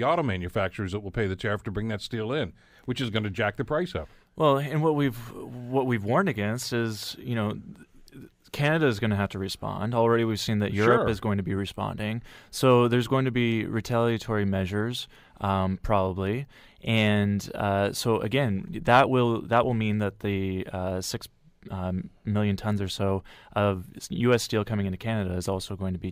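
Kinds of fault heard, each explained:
No technical faults can be heard in this speech recording. Nothing in the audio points to any problem along the path it took.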